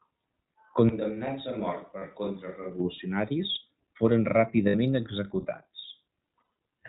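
Speech heard through the iLBC codec the whole way: nothing reaches above 4 kHz, and the voice has a plainly audible rough, slightly synthetic grain. That grain is what separates it from a plain narrowband low-pass filter, which would dull the sound without making it buzzy. The coarse excitation coding fits iLBC's 20 ms frame mode at around 15 kbps. From 0.89 s to 2.80 s the sound turns abruptly roomy and hollow, loses bass, drops by around 10 dB and carries room noise far below the speech. That points to a switch to a distant microphone, likely because the close microphone's signal was lost and a farther one such as a camera microphone took over. Unlike a simple gain dip or added reverb, the tone, the room and the noise floor all change together, and they snap back just as suddenly. Lost iLBC frames occur at 1.98 s for 40 ms, at 4.68 s for 60 ms, and from 6.38 s to 6.43 s, where 140 ms of loss is scattered over 200 ms with the longest run near 70 ms. 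Each gap is filled with a held, buzzy or breathy vowel-like sound built from the last pitch cycle, not with silence as in a true dropout. Because each iLBC frame decodes on its own, the speech recovers cleanly right after each gap.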